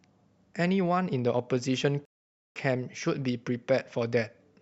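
At 2.05 s the speech stops dead and stays silent until 2.56 s. This is a rebuffering stall. The player ran short of downloaded audio and paused until more arrived. Speech then resumes exactly where it broke off, with nothing missing. About half a second is added.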